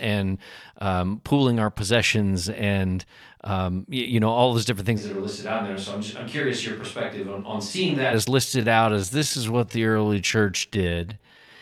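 At 5.00 s, just after "all those different things", the speech suddenly turns roomy and hollow. The bass thins out. The level falls by about 5 dB. A layer of room noise appears, roughly 35 dB below the speech. This is a switch to a distant microphone. The likely cause is that the close microphone's signal dropped out, leaving a pickup further from the talker. The close sound returns abruptly at 8.11 s.

From 8.45 s to the end, the pace drops sharply while the pitch holds steady. This is a time-stretched section, running at about 0.65 times normal speed. The likely cause is software stretching the audio to fill a length. It keeps the pitch by repeating short slices. The slowed speech drags.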